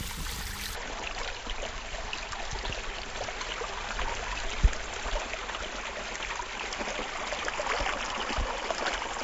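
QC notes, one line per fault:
0.00–0.75 s, wrong sample rate: the sound runs at 2.0x speed and a full octave (12 semitones) high, which fits 16 kHz material played at 32 kHz. Unlike a pitch shift, timing compresses too, so events race as well as rise.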